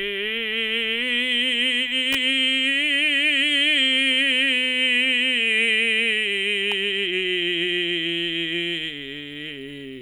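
At 2.13 to 2.15 s a sharp snap, peaking around -5 dBFS, cuts across the music, and at 6.72 s a much quieter click follows. Both sound like an electrical switching spike, likely an arc from a nearby switch or motor coupling into the audio line.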